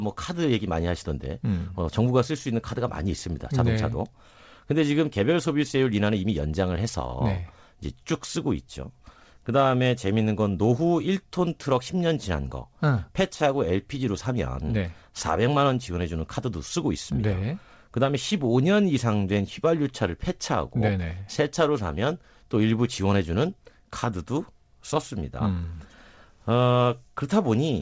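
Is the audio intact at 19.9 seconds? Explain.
Yes, the audio is intact at 19.9 seconds, with the speech carried cleanly through the call path and only its usual band limit, nothing above 8 kHz, as fits a G.722 codec.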